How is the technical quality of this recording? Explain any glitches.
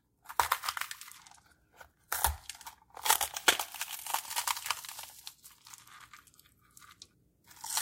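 The recording has one fault. From 0.12 to 7.62 s, clock slip clicks occur: two unsynchronised clocks, likely drifting by about 50 ppm, drop or repeat single samples roughly every 0.4 s, producing faint regular ticks.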